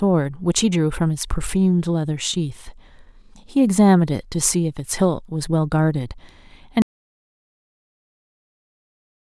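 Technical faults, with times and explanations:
6.82 s to the end, audio dropout to silence: the speech stops abruptly mid-flow and never returns, leaving a stretch of silence with no room tone or background hiss underneath, which sounds quite different from a pause in a live room. The likely cause is the input being lost, through a disconnected device, a broken link or an accidental mute, while the recorder kept writing silence, so whatever followed is gone.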